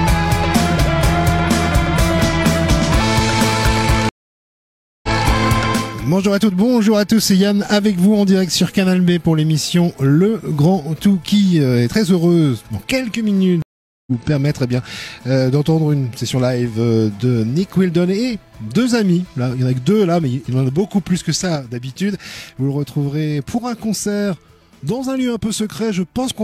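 Silence falls at 4.09 s for 0.94 s and at 13.62 s for 0.45 s, each time resuming about half a second further on: a stream reconnect with a fresh decoder. At 21.56 s, sound and background together drop about 5 dB until the end, a sudden gain jump, likely a gain change applied without a ramp.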